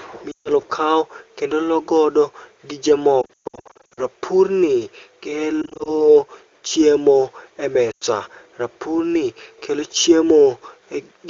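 Lost AMR speech frames recur four times. From 0.31 to 0.49 s, about 140 ms of speech goes missing just before "kaw kendo". The decoder stretches the last good frame with falling gain, so the sound smears and thins. From 3.21 to 4.06 s, losses scatter over about 760 ms, with runs up to 120 ms, giving a broken, warbling stretch. From 5.62 to 5.95 s, brief single-frame dips flicker. Between "chiemo e" and "rapurni kelo", at 7.91 to 8.04 s, a 100 ms run blurs and fades.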